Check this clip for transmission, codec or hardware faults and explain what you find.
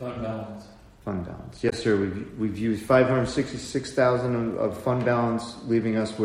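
One codec fault is present: damaged data in a compressed stream, from 1.69 to 1.73 s. Some bytes of the encoded stream arrived wrong, so the decoder could not read the frames covering those 40 or so milliseconds correctly. It lost frame sync and had to hunt forward for the next valid header before it could decode cleanly again. In the sound, this leaves a short chirp or blip that breaks into the audio for that brief moment.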